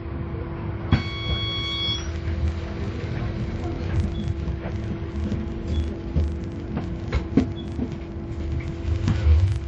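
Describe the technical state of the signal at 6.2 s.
At 6.2 s the audio is band-limited, with nothing above 10.6 kHz. It rings and sounds washy, with hiss that swells and falls with the signal. This is likely WMA compression, which fits a bitrate near 48 kbps. Block-based quantisation smears noise across tens of milliseconds.

A filter restarted on every block also runs from 0.96 s to the end. Each block begins from silence, so it opens with a small transient. These repeat at 25 Hz as a steady buzz that follows the signal's level.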